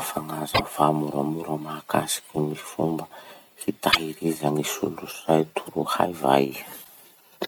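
At 0.51, 3.88 and 6.81 s the speech breaks into a roughly 0.1 s blip: damaged data in the compressed stream, where the decoder misreads corrupted frames and loses sync.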